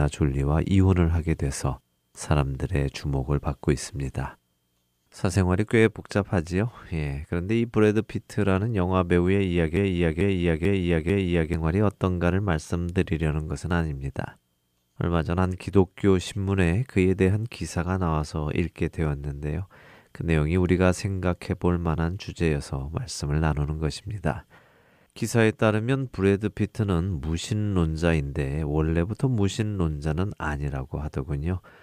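At 9.77 s the speech hits a broken-record loop: a 443 ms fragment repeats four times until 11.54 s, likely a stalled player or stream resending its last chunk, and that stretch of speech is lost.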